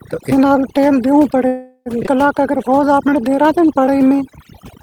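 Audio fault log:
Throughout, overdone noise removal: the background drops and breaks up into twinkling specks. A noise reduction stage set far too strong is pushing individual frequency bands down or out whenever they sit close to its noise estimate, so the quieter parts of the speech are removed along with the noise, leaving those isolated flickers where bands switch on and off.
1.47 to 1.89 s, call audio freeze: the sound hangs as a fading buzzy continuation for about 0.38 s, ending in roughly 50 ms of silence, and then the speech resumes exactly where it left off with nothing lost. This is likely a jitter buffer running dry while packets were held up in transit. The receiver stretched the last sound to cover the wait, so a gap was inserted and the playout delay grew by about 0.38 s.
2.06 to 2.10 s, skip ahead: the speech lurches forward with almost no gap, joined by only a few milliseconds of fill, and roughly a fifth of a second of speech is simply gone, so the two sides butt together abruptly. 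Audio was dropped while later packets were already waiting, which cut the accumulated delay back down by about the same amount.
2.40 to 4.44 s, jitter buffer slow-down: over these two seconds the speech drags at about 91 % of normal speed while the pitch stays put, with drawn-out sounds. The receiver was rebuilding its reserve by repeating single pitch periods and slivers of pauses many times over, adding about 0.2 s in total. The repeated fragments give the sound that stretched quality.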